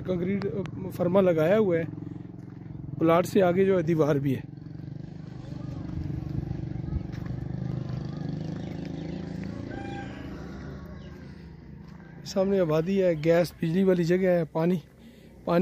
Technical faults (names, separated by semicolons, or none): loud pop; low bit depth without dither